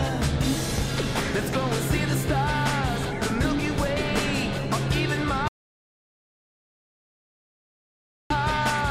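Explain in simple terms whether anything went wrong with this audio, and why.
Something did go wrong. At 5.48 seconds the sound suddenly stops. It comes back at 8.30 seconds. That is an audio dropout to silence, lasting about 2.8 seconds. The gap is total silence, with no background hiss or room sound at all. That points to the recorder getting no input and writing silence. The likely cause is a lost connection or an accidental mute. Whatever happened in those seconds is gone.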